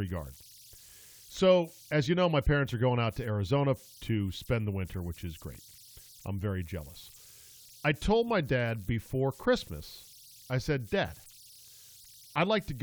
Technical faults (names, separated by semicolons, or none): converter idle tones; repeated buffer